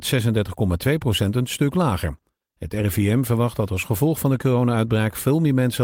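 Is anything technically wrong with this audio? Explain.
No, nothing technically wrong stood out on listening to this speech recording.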